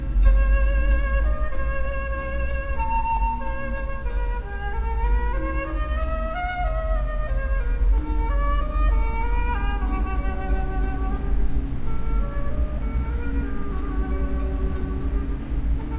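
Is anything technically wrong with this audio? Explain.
No, nothing here stands out as a technical problem; the sound comes through without any audible glitches or trouble worth flagging.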